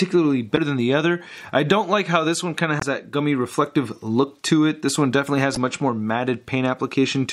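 Damaged data in a compressed stream strikes three times, from 0.56 to 0.59 s, 2.78 to 2.83 s, and 5.53 to 5.57 s. Corrupted bytes in the encoded frames leave the decoder unable to read them correctly, so it loses frame sync and has to hunt for the next valid header. Each time the result is a short chirp, squawk, click or hole of roughly 25 to 45 ms that cuts abruptly into the surrounding sound.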